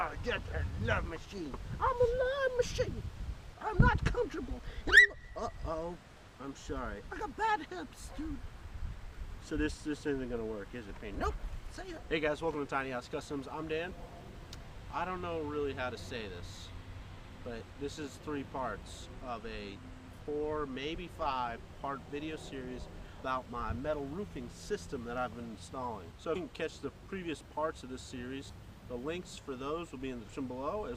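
At 11.97 to 12.00 s, 23.19 s, 26.35 to 26.39 s and 28.49 to 28.52 s, the sound lurches forward as compressed frames are skipped. The decoder never plays whole blocks of the stream, losing roughly a fifth of a second at the first and third points, around 150 ms at the second and about 70 ms at the last. That fits runs of several 20 ms frames. Unlike a dropout, there is no silent gap; the audio simply jumps ahead at each join.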